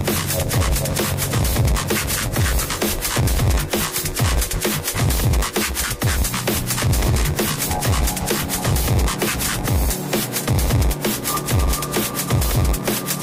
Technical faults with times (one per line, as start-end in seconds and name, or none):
0.00-13.23 block size mismatch (padded)